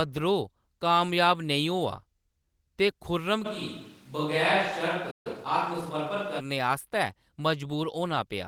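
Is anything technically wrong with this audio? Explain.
Yes, three faults overlap in the middle of this speech clip.

Switch to a distant microphone, from 3.47 s to 6.38 s. The sound turns roomy and hollow at once, thinner in the bass and about 5 dB quieter, with room noise sitting roughly 30 dB below the speech. The likely cause is that the close microphone's feed dropped out and a farther pickup took over, so more reflected room sound and less direct sound reach it. The return to the close sound at 6.38 s is just as abrupt.

Playback stall, from 5.10 s to 5.27 s. The audio cuts to silence mid-flow for about 0.14 s, then resumes. This gap probably comes from the player running short of data, or its audio thread being held up, so it had nothing to output until the supply recovered. It falls inside the distant-microphone stretch.

Time-compressed catch-up, from 5.27 s to 6.21 s. Right after the stall the speech runs about 1.15 times faster while its pitch stays normal. 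To work off the backlog the stall built up, the player removes short slices of audio and cross-fades the joins. That produces a hurried delivery, which ends once the player is back in step, shortly before the close microphone returns.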